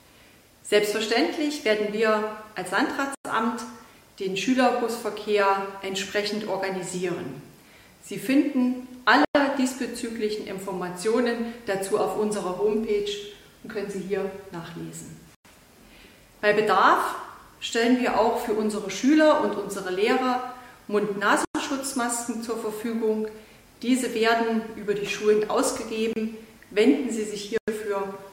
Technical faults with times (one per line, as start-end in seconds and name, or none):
3.15-3.25 gap between chunks
9.25-9.35 gap between chunks
15.35-15.45 gap between chunks
21.45-21.55 gap between chunks
26.13-26.16 gap at a join of encoded pieces
27.58-27.68 gap between chunks